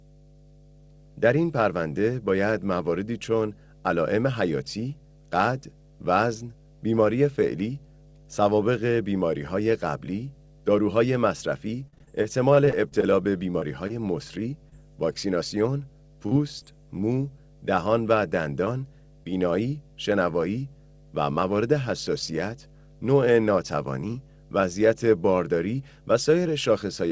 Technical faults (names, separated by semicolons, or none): mains hum; repeated packet loss (robotic sound); short concealed packet loss